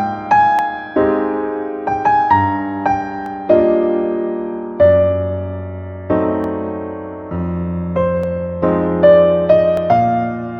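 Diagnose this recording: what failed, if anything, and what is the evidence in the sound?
Dropped samples produce single sharp clicks at 0.59, 3.26, 6.44, 8.24 and 9.77 s, each a thin vertical line across the spectrum. At each point a fraction of a millisecond of the stream is missing, so the waveform jumps straight from one value to a later one. That step is the click, and no sound is audibly lost. The stage is likely the driver or buffer, with samples occasionally skipped during transfer.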